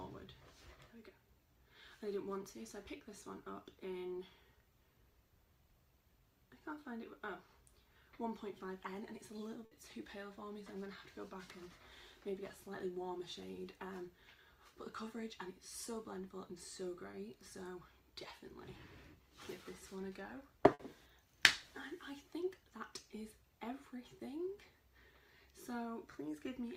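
Short concealed packet loss at 2.97 and 17.11 s: about 20 ms never arrived, so the decoder extended the preceding sound and blended back, leaving a brief smear or wobble. Burst of packet loss at 9.65 and 20.73 s: about 60 ms went missing, bridged by a continuation that fades as a held buzz or hiss before the audio resumes further on, with that stretch lost.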